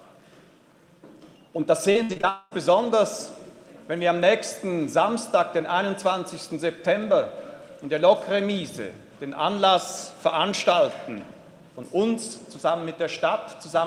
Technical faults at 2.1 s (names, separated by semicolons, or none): repeated packet loss (robotic sound)